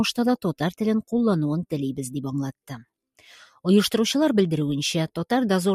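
Nothing technical goes wrong anywhere in this bit of audio, so there's no fault to point to at any moment.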